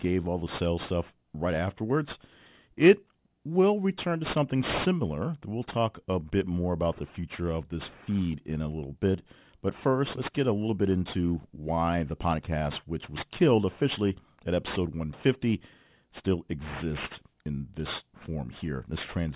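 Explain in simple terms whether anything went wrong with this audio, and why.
Aliasing runs through the whole clip: the speech was squeezed into a lower sample rate unfiltered, so hiss sounds above about 4 kHz fold back as gritty, metallic tones rather than simply sounding muffled.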